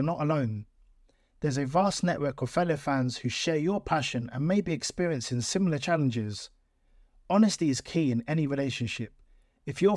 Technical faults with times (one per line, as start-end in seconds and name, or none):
none